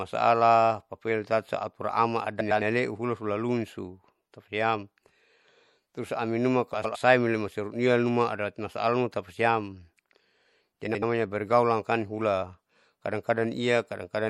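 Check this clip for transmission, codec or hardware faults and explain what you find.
Two faults are audible in this speech: a steady codec degradation throughout, and three brief scrambled stretches.

Throughout the clip, the sound is watery and swirly, with metallic chirping on s sounds, dulled treble and smeared attacks. The likely cause is MP3 compression at a bitrate around 64 kbps. Short of bits, the encoder caps the high frequencies and lets weak spectral lines flicker between frames.

At 2.40 to 2.62 s, just before "haleu hula hulaluniso tapasiam", at 6.74 to 6.96 s, just after "terus aminuma", and at 10.86 to 11.03 s, the audio gives a garbled flutter. These are frames out of order: two adjacent blocks of about 105 ms each (about 78 ms in the third case) were played swapped. This points to four MP3 frames per block in the first two cases and three in the last. No time is lost.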